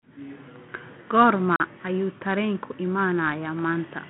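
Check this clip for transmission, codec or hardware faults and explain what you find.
One fault is audible in this speech: packet loss on an ADPCM call. From 1.56 to 1.60 s the audio drops to a hard-edged silence about 40 ms long, which fits roughly two lost packets. The gap itself is silence, but the decoder's adaptive predictor and step size lose track of the sender's while no data arrives. When packets resume, the speech comes back with brief distortion, before the decoder re-converges over a few tens of milliseconds. The G.726 ADPCM link itself runs at 32 kbit/s, typical of DECT, with a line band of 150 to 3400 Hz and light codec damage.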